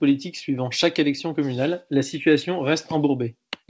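No faults can be heard in this speech, which came over a WebRTC call path working as intended: the band stops at 8 kHz, consistent with a wideband codec such as G.722 at around 64 kbps, and there are no dropouts, glitches or level problems.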